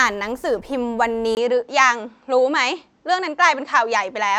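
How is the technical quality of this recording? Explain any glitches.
The technical quality drops partway through because of one fault. From 1.35 s to the end, the speech turns dull and boxy, likely because the input switched to a poorer device. A 20 ms silence marks the switch. After it, nothing passes above 8 kHz, the level stays about the same, and a faint new noise floor sits far below the speech. A spectrogram shows the upper band going empty at 1.35 s, and the waveform shows a brief flat gap there.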